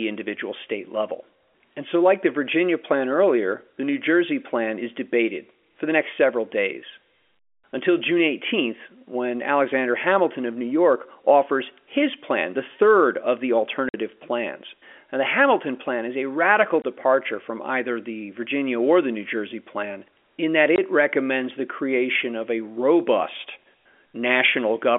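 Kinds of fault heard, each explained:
Packet loss filled with silence: Stretches of the speech stream never arrived, and the receiver played dead silence in their place. The holes sit at 13.89 s after "the third of the" (50 ms), 16.82 s after "plan is a radical" and 20.76 s after "plan in that" (20 ms each). Both lengths are whole multiples that fit 10 ms packets. Each gap opens and closes abruptly.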